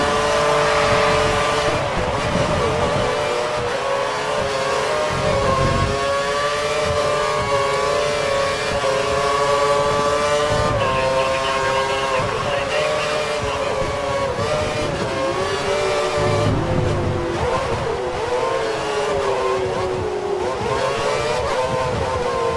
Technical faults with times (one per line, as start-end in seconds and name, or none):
none